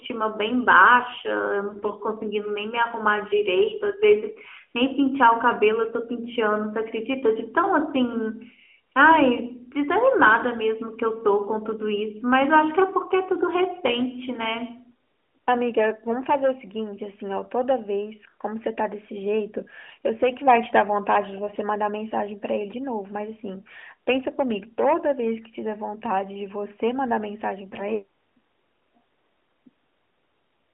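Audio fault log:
throughout, echo with no canceller: every phrase returns as a thinner copy about 23 dB down, around 150 ms late. It is a distinct repeat, unlike smooth reverb.
1.70–1.91 s, AMR bit errors: flipped bits in the weaker-protected codec data make the sound hoarse and gargly while pitch and level hold, with no silent gap as in packet loss.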